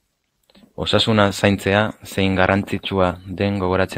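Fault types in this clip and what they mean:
Nothing stood out on listening to the speech in this recording.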